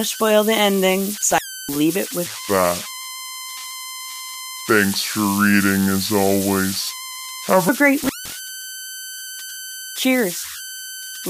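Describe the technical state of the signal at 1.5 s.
The speech drops out between 1.31 and 1.76 s, crackling at both edges with faint hiss inside. This is an intermittent contact: a loose cable or plug opened the line for about 0.31 s. Throughout, a tone around 1.5 kHz and grainy noise sit about 12 dB below the signal. These are converter idle tones from an undithered delta-sigma converter cycling through repeating bit patterns.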